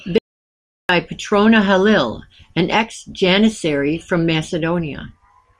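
From 0.18 s to 0.89 s the input signal was likely lost upstream, perhaps through a momentary disconnection or mute, while the recorder kept writing silence. The result is an audio dropout to silence lasting about 0.71 s: the speech cuts off abruptly, the gap holds silence with no room tone or noise floor beneath it, and then the speech resumes mid-flow. Whatever was spoken during that stretch is missing entirely.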